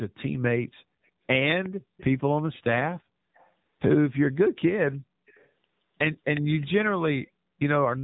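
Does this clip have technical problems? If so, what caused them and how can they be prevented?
Yes. Throughout the speech, the AMR narrowband mobile codec is plainly audible: nothing passes above 3.8 kHz, and the pulse-driven vocal-tract model leaves the voice buzzy and synthetic, consistent with a low bitrate around 7.4 kbps. Routing the call over a wideband codec or a higher AMR mode prevents this.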